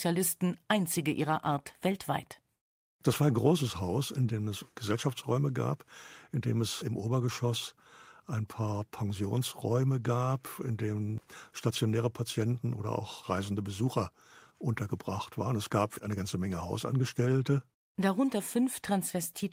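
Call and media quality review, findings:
Clock drift between sender and receiver, whole clip: the sender clock runs about 5% fast relative to the receiver, so the jitter buffer keeps overfilling and forcing discards. On a spectrogram, faint vertical seams appear at unevenly spaced splice points, with no overall pitch shift. Probable component: receiver jitter buffer.

Repeated timing corrections, 0.05 to 19.43 s: the receiver trims short pieces to hold playback near 105% speed. These are heard, if at all, as slight hiccups or an unsteady tempo. On the waveform, small abrupt joins occur at irregular intervals, all of them cuts. Probable component: adaptive playout time-scaling.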